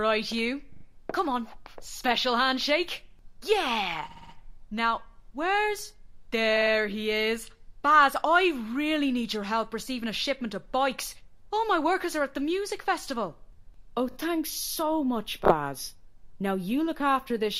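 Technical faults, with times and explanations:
0.72 to 0.84 s, 4.09 to 4.33 s, 6.56 to 6.71 s, 14.11 to 14.15 s and 15.44 to 15.54 s: repeated frames. Each time, a short block of compressed audio (40, 60, 50, 20 and 30 ms long respectively) is decoded again, three, four, three, two and two extra times. The same fragment stutters. The repeats lengthen the sound by 120, 240, 150, 40 and 60 ms.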